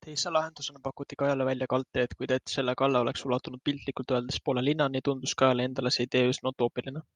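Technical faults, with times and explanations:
0.88–5.49 s, call bitrate drop: the encoder is starved of bits, coding the speech more coarsely and cutting the top band from 20 kHz to 12 kHz, which fits a fall from 64 to 26 kbps. It sounds rough and dull for about 1.8 s at worst, recovering before "endale see".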